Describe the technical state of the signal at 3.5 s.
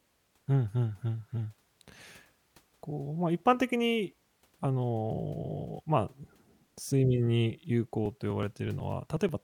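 At 3.5 s the speech signal is intact, with no fault audible at that moment.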